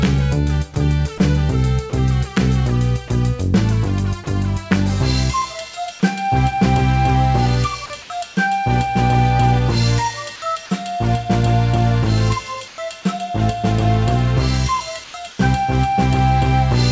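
Short gaps interrupt the sound three times, at 1.18–1.20 s, 1.90–1.92 s and 7.86–7.90 s. Each lasts 20 to 40 ms. In each gap the real audio is gone and flat noise stands in. This is sound dropped by the voice detector. The likely cause is that the sender's detector judged these brief stretches to be background and stopped sending, and the receiver filled the hole with comfort noise. Later, comfort noise replaces the background three times: at 8.02–8.10 s, 12.68–12.78 s and 15.04–15.14 s. These spans last 80 to 100 ms. The background sits about 21 to 22 dB below the loud parts. In these spans its natural texture turns into smooth, featureless hiss. That hiss is quieter by about 2 dB, then about 4 dB, then about 2 dB. The sender likely paused transmission during these stretches, and the receiver synthesised a stand-in. Throughout, the G.722 call path leaves nothing above 8 kHz.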